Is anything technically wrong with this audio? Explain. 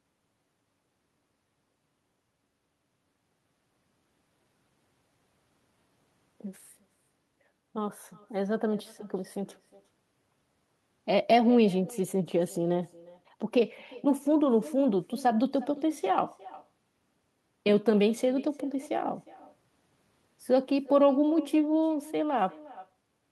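Yes, there's echo with no canceller running the whole way through: the far end's loudspeaker feeds its microphone, so your speech returns about 400 ms later, roughly 21 dB down and thin. The call path's Opus coding also rolls off everything above about 12 kHz.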